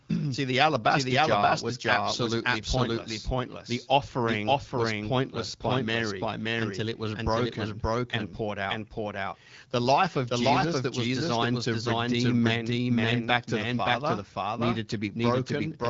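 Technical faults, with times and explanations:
Throughout, doubled audio track: a second, full-band copy of the speech trails the original by about half a second at roughly equal level. It has no decay or room colour. It is likely a second capture path running late, mixed back in.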